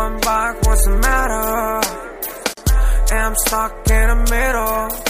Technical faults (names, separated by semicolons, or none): gap at a join of encoded pieces